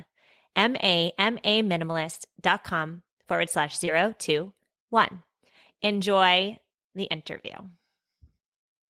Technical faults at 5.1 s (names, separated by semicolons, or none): none